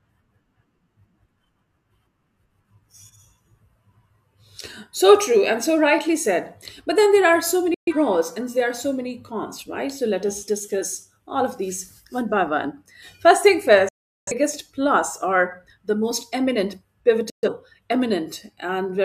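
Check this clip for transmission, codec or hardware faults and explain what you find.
The speech has three digital broadcast dropouts, at 7.74–7.93 s after "then there are so", at 13.89–14.32 s before "plus or the most", and at 17.30–17.48 s after "or the most eminent". The receiver lost frames, consistent with three, nine and three missing frames respectively, and muted until good frames returned. The sound cuts off abruptly, within about 3 ms, leaving silent gaps. The middle gap is the longest. The speech sent during each gap is gone.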